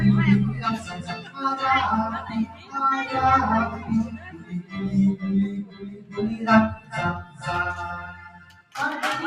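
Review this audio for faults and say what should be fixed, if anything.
A speech noise suppressor runs over the whole clip. It treats steady tones and decaying tails as noise and pulls them down. Attacks pass, sustained parts sink. The level swings by roughly 15 dB, so the sound pumps and thins.

The sound is cut by the noise suppressor at 0.78–1.38 s, 2.27–2.74 s, 4.15–4.75 s, 5.64–6.18 s, 6.77–6.93 s, 7.23–7.43 s and 8.29–8.75 s. Held or fading sound drops by about 9 to 12 dB there. Tails end early.

To prevent this, bypass the speech noise suppressor for any non-speech material.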